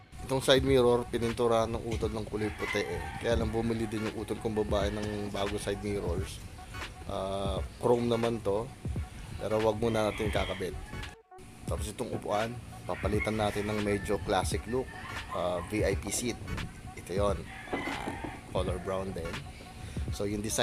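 Nothing stood out as a technical problem on listening.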